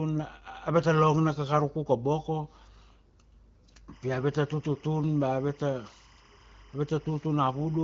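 From 3.64 to 3.81 s the speech turns hoarse and gargly, scratchy while keeping roughly its pitch and loudness. These are AMR bit errors: on a weak link, a few percent of the lightly protected bits in the HD Voice stream arrived flipped, misplacing excitation pulses and skewing the fine pitch, gain and spectral values.

From 3.93 s to the end, a steady chirping warble sits well beneath the speech, roughly 30 dB down. This is timecode bleed: a 25-frame-per-second linear timecode signal, toggling between pitches near 1 and 2 kHz, leaking in from an adjacent track or cable.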